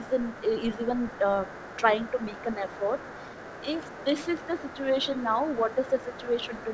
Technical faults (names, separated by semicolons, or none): other side's voice leaking through; speech suppressed in double talk